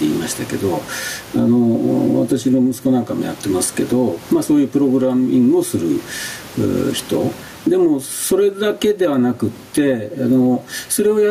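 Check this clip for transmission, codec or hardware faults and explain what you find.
The clip has gain pumping throughout. The swing is around 15 dB. The likely cause is input gain set far too high, with a fast limiter or compressor clamping down on each loud syllable and then releasing. The room noise sits about 36 dB below the speech. Loud and quiet passages sit close in level, so the speech sounds squashed.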